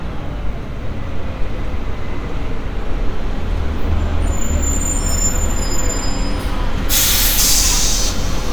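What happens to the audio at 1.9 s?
At 1.9 s the audio is intact, with no dropout, click, distortion or other fault.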